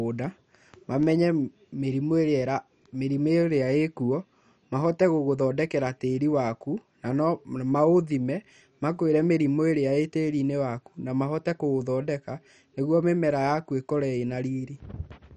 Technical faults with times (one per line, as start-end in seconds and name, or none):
0.00-15.36 MP2 compression